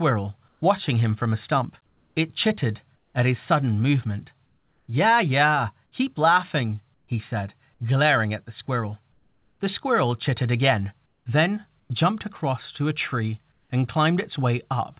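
Pauses at 0.48 to 0.62, 1.86 to 3.14, 4.46 to 4.88, 6.94 to 7.08, 9.12 to 9.6, 11.06 to 11.9 and 13.52 to 13.7 s lose their real background. A smoother synthetic noise fills them. In five it drops about 4 to 6 dB. This is likely comfort noise in place of the background, sent during discontinuous transmission. The call band stops at 4 kHz throughout.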